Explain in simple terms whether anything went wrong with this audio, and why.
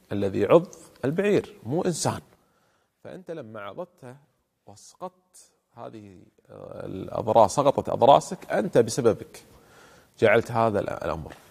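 Between 6.56 and 6.98 seconds there's zipper noise, a quick ticking that rides on the sound while the volume shifts by a large amount. The level moves in small jumps, about twenty a second, with no smoothing between them, so each jump leaves its own tiny click.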